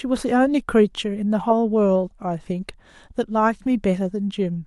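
At 3.67 s a single sharp click marks dropped samples, likely a few samples lost, so the waveform jumps abruptly, drawing a thin vertical line across the spectrogram.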